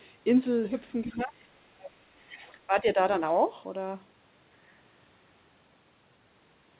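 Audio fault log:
1.04–1.21 s and 2.19–2.55 s, other side's voice leaking through: the echo canceller likely failed to remove the far end's loudspeaker playback from the microphone signal. A faint second voice comes through in two short scraps, roughly 25 dB below the main talker. Because the call path passes nothing above 4 kHz, the leaked voice sounds narrow and muffled.
1.04–1.37 s, 1.57–2.11 s and 2.67–2.97 s, speech suppressed in double talk: with both sides talking at once, the echo canceller likely could not separate the near talker from the loudspeaker echo and turned the whole signal down. The talker's level sags in three stretches: by about 15 dB in the first, by as much as 30 dB in the second, where it nearly drops out, and by about 10 dB in the third.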